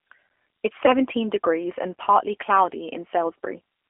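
A short speech clip carried through the G.729 codec, with one packet-loss dropout. Throughout, the sound has the slightly rough, synthetic texture of G.729: the decoder rebuilds each 10 ms frame from a vocal tract filter, a pitch predictor and a few pulses. The damage is plainly audible, which fits an 8 kbit/s codec of the G.729A kind. On a spectrogram, energy sits in a band from about 300 Hz to 3.4 kHz, with nothing above that edge. Harmonics look smeared and grainy rather than cleanly striated. From 0.86 to 0.98 s there is VoIP packet loss concealed by the speech codec, after roughly 20 ms of audio went missing. The decoder fills the gap by repeating its last pitch and filter at falling gain, so the sound is briefly stretched into a fading buzzy tone or coloured noise. It stays weak for a while after real packets resume. A spectrogram shows unnaturally steady, fading energy across that span, and the waveform envelope sags and recovers gradually.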